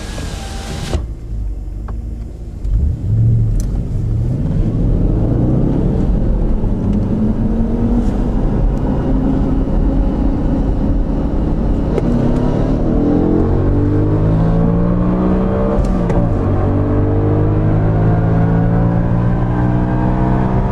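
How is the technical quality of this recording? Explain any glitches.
Two short stutters mark the recording, both caused by repeated frames. At 2.98 s a 26.1 ms block plays twice, and at 4.47 s a 52.2 ms block plays twice, lengths that fit one and then two compressed frames. A decoder given the same frame data again plays that slice of sound a second time, so each repeat is heard as a brief echo-like hiccup. Unlike a dropout, nothing is lost; the same sound returns, and the clip runs longer by each repeated block.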